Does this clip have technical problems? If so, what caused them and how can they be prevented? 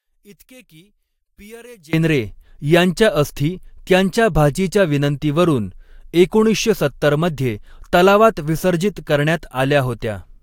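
Yes. From the start to 1.93 s the speech drops by about 27 dB. That's likely one channel inverted: with one side's polarity flipped, the shared content cancels in the mono sum, leaving only the leftover difference. Check polarity on each channel before any mono fold-down.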